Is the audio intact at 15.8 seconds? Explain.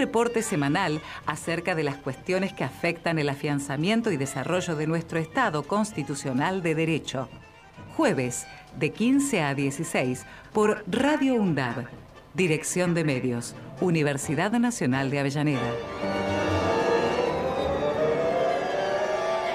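Yes, the audio is intact at 15.8 seconds, with no dropout, click, distortion or other fault to be heard there.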